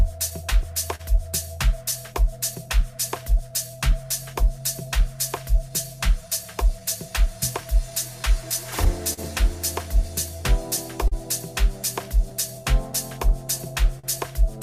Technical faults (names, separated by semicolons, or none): clock drift between sender and receiver; scattered short gaps; repeated timing corrections; repeated stalls (stutter)